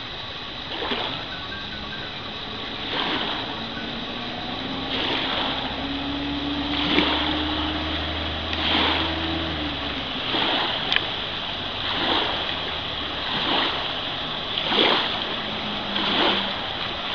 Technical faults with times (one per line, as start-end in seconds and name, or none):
none